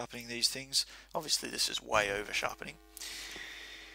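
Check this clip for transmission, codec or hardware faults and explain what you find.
One fault is present: a filter restarted on every block, from 1.93 s to the end of the clip. A filter in the chain loses its internal state at each block boundary and starts again from silence, so every block opens with a small transient. These arrive at 375 Hz, which fits a 128-sample block, and merge into a buzz that rises and falls with the sound's level. Unlike mains hum, it tracks the signal rather than holding a steady level, and unlike random dropout clicks, it is perfectly regular.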